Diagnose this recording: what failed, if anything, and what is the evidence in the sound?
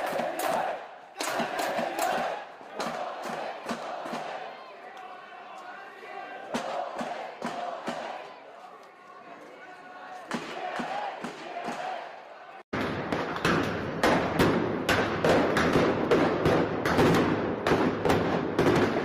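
No failure found in this recording.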